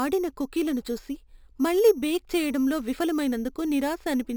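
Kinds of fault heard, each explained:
Imaging from sample-and-hold upsampling, throughout: the speech sounds as if it was raised to a higher rate by holding each sample in place without any smoothing filter, which fits an original rate of 12 kHz. Mirror copies of the speech spectrum fold up into the 6 to 12 kHz band at about 21 dB below the voice, giving a bright metallic fizz that rises and falls with the speech, its lowest copy moving opposite to the pitch.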